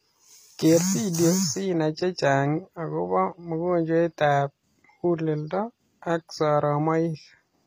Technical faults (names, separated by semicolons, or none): HE-AAC compression